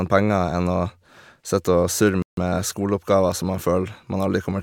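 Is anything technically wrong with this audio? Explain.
Yes. At 2.22 s the speech stops dead for 150 ms, a rebuffering stall, and resumes on "skoleoppgaver som man" at 2.37 s. The player exhausted its downloaded audio and paused until more data arrived, so nothing is lost, but the gap adds time and breaks the rhythm.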